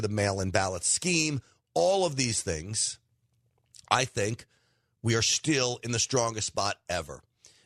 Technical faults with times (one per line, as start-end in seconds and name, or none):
none